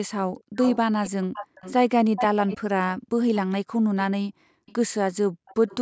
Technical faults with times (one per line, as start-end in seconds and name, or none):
0.39-0.77 echo leak
1.03-1.73 echo leak
2.16-2.58 echo leak
4.66-4.73 echo leak
5.47-5.76 echo leak